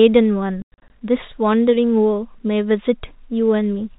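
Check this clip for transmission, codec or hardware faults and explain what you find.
There's one real fault: packet loss filled with silence, between about 0.62 and 0.90 s. Across that 280 ms stretch the audio keeps dropping out, about 180 ms of it gone in all, with the longest hole running 100 ms. The gaps come in steps that fit 20 ms packets. The receiver had nothing to play for those slots, so it put out dead silence. Each gap starts and stops abruptly, so the speech sounds choppy. The G.711 telephone coding shows up as the expected 4 kHz top end, with at most faint quantisation hiss.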